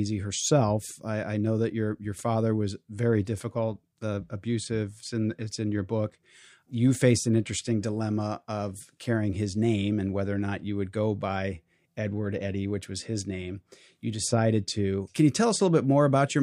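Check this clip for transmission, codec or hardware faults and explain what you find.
No transmission, codec or hardware faults turn up anywhere in the speech on listening.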